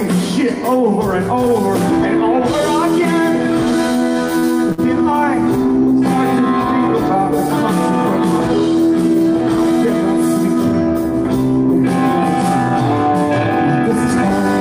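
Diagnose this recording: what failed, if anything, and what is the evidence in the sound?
The trouble is at the network end, in the receiver's jitter buffer. Two short stalls from a late packet show up close together, at about 4.39 s and again at 4.72 s. Each time the sound hangs on itself with a slight buzz or dip, about 36 ms the first time and 56 ms the second, then picks up exactly where it left off. Nothing's actually lost. The buffer ran dry, the receiver stretched the last bit of audio until the packet turned up, and playback is delayed by that much from then on.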